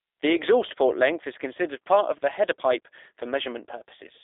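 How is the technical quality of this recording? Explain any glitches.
The recording is marked by G.729 codec damage from start to finish, and it is plainly audible. The speech has been squeezed through a narrow telephone-style line and then rebuilt by a low-rate speech coder. Rather than storing the waveform, this kind of codec sends a model of the vocal tract, a pitch estimate and a few excitation pulses per short frame, which fits a rate of about 8 kbit/s. The speech stays intelligible but sounds slightly rough, buzzy and synthetic. The band runs from about 300 Hz to 3.6 kHz, with nothing above 3.7 kHz, so the voice sounds thin and muffled and has lost its crisp sibilance.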